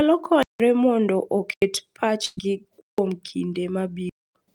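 At 0.43 s the output buffer likely went unfilled, leaving a block of digital silence of about 171 ms, which fits an 8,192-sample block. The speech cuts to silence and back. A shorter hole of about 85 ms follows at 1.54 s. From 2.25 to 2.39 s a burst of packet loss drops about 120 ms of audio; the receiver stretches and fades the last sound, then speech resumes further on. Further blocks of digital silence open at 2.81 s (about 171 ms) and at 4.09 s (about 256 ms).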